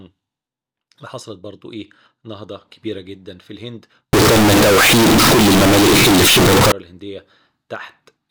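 From 4.13 to 6.72 s the speech turns into a harsh, near-square blare at an almost fixed, high level, with background noise as loud as the voice while pitch stays traceable. This is likely float read as integer, with 32-bit float samples taken as 32-bit integers. Unlike clipping, the level doesn't follow the original loudness.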